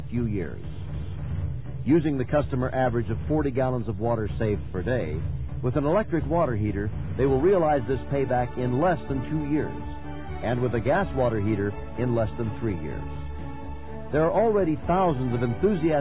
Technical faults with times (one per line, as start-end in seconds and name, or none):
none